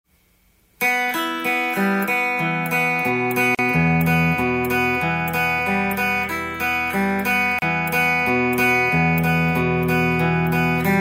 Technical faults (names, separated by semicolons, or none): gap at a join of encoded pieces